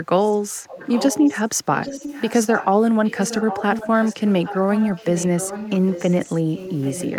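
An echo leak, likely from a far-end loudspeaker whose echo canceller let part of the microphone pickup return down the line, runs through the clip with a steady delay of 812 ms. It is barely audible at 0.24–0.37 s. It then becomes a clear, fairly strong trailing copy of the speech at 0.66–1.41, 1.76–2.67 and 3.04–4.58 s, and is slightly weaker at 4.75–6.36 and 6.55–7.19 s, overlapping and smearing each phrase.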